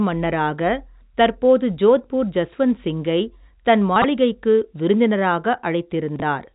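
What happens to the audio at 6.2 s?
At 6.16 to 6.22 s the speech jumps: chunks out of order. A 20 ms chunk arrived late and plays two chunks after where it belongs, so the sound is stepped through in the wrong sequence and three hard joins fall within that 60 ms span. Unlike a dropout or packet loss, no audio goes missing or silent; everything is present but scrambled. The band limit near 3.8 kHz from the telephone coding stays constant through this span.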